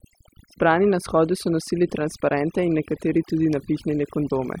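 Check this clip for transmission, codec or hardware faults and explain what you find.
Overdone noise removal runs throughout. Aggressive suppression mutes frequency bands near the noise estimate, taking quiet speech detail too. Background drops and breaks up into twinkling specks.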